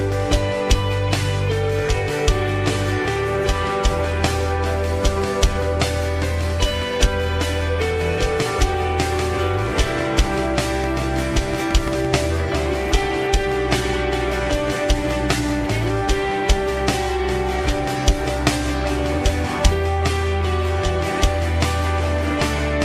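From 10.84 to 12.06 s a train of clicks rides over the sound: about seven sharp, near-identical ticks at a steady 5.8 per second, standing out roughly 10 dB above the audio. Evenly spaced pulses like these are likely interference from nearby equipment or a faulty connection or power supply. On a waveform they show as thin spikes at regular intervals; a spectrogram shows matching narrow vertical lines spanning the full frequency range.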